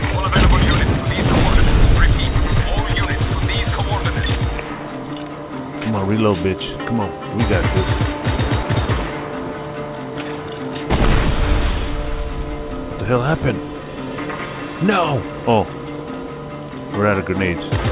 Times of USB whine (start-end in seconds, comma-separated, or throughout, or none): 3.49-17.92